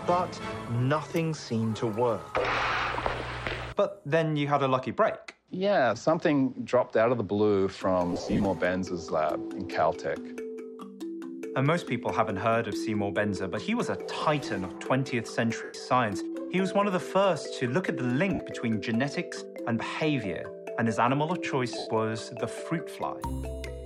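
Bluetooth LE Audio frames were lost at 8.13–8.45 s, 15.64–15.74 s, 18.33–18.40 s and 21.78–21.87 s. The LC3 decoder patched each gap by replaying the last spectrum with scrambled signs, smearing the sound into brief noise. The first episode scatters short dropouts across 315 ms.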